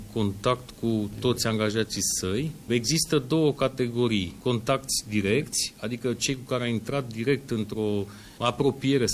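Nothing in the audio stood out as a technical problem on listening.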